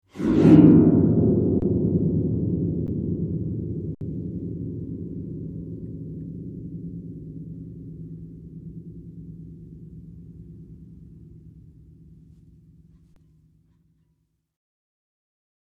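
Underruns with a held sample occur at 1.60–1.62 s, 2.87 s, 3.95–4.01 s and 13.14–13.16 s. Each time, the output buffer ran dry and the converter froze on its last value. The sound cuts out briefly, for 21, 14, 64 and 21 ms; the first and last gaps each span 1024 samples. Live audio was lost during each gap, roughly 20, 15, 70 and 20 ms. On the waveform, each gap is a flat line. On the spectrogram, it is a blank vertical strip.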